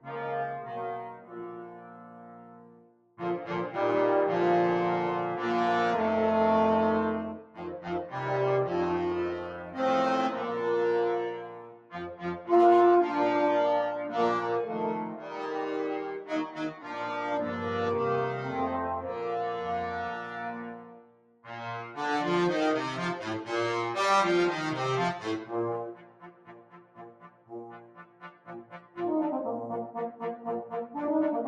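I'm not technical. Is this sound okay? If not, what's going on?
No. The main problem is a noise suppressor applied to music or sounds. A filter meant to clean up speech on a call was left switched on, and it mistakes steady, held sound and lingering echoes for background noise. Sudden hits pass through, but anything sustained keeps getting turned down, so the level breathes up and down all the way through. That constant pumping is what sets this apart from a network glitch, which would leave clean gaps or garbled bits instead.

The worst moments are the sound cut by the noise suppressor, where the filter pulled the audio down harder than elsewhere: 1.04–3.18 s, 7.36–7.80 s, 9.51–9.76 s, 11.34–12.49 s, 15.05–15.44 s, 16.18–16.95 s, 20.11–21.44 s and 25.93–28.97 s. In these stretches, held or fading sound sinks noticeably and its tail is chopped short, while sharp onsets still come through. 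The longest dips, near the start and close to the end, last a few seconds each. The sound fades away there rather than cutting out completely.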